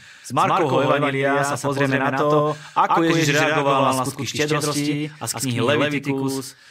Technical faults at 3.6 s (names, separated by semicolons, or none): doubled audio track